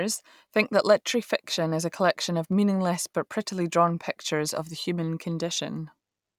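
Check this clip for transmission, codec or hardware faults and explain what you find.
Three sharp clicks sit in the speech, at 2.53, 3.62 and 5.51 s. Each is a single instant with no gap in the sound. These are likely dropped samples. A handful of samples, a tiny fraction of a millisecond, go missing from the stream. The waveform then leaps from one value straight to a later one. That step is heard as a brief tick and shows as a thin vertical line across the spectrum.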